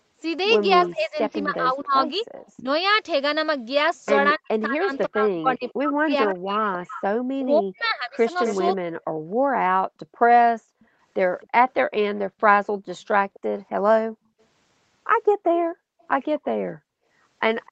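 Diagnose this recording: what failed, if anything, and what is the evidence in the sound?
Echo leak in call processing: from 0.85 s on, a discrete copy trails the speech by 257 ms at about 15 dB down, likely a far-end canceller missing its loudspeaker. Distinct delay, not reverb.

Speech suppressed in double talk: between 0.9 and 8.29 s the speech dips by roughly 40 dB in pieces, about 3 s in total, likely from canceller attenuation during overlap.

Background gated by the echo canceller: room sound drops about 39 dB around 10.59–10.88 s and about 40 dB across 14.05–17.07 s (roughly 0.7 s), affecting background rather than the speech.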